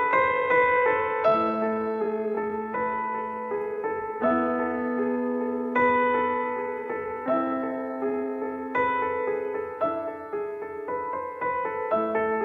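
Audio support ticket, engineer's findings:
Dragging pace with unchanged pitch, 0.0–8.7 s, then abrupt return to normal speed. Time-stretched section at 0.692x; likely stretch software repeating short segments to lengthen.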